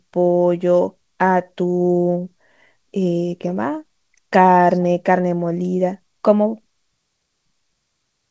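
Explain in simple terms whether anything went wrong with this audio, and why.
Nothing went wrong; it sounds like an ordinary call.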